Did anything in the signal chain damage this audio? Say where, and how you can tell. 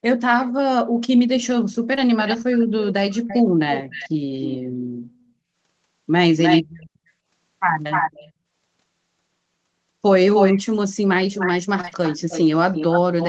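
Yes. At 1.95 to 1.99 s, 3.27 to 3.31 s, and in a run from 11.81 to 11.93 s, the sound briefly smears or wobbles. This is short concealed packet loss at the network stage: about 20 ms gaps were each filled by extending the preceding sound.

A copy of the speech returns about 300 ms late at 2.27 to 4.58 s, 5.12 to 5.24 s, 6.41 to 6.90 s, 7.92 to 8.32 s, 10.35 to 10.61 s and 11.33 to 13.29 s. It ranges from barely audible to as loud as the speech. This echo leak likely comes from a far-end loudspeaker that the echo canceller did not fully suppress.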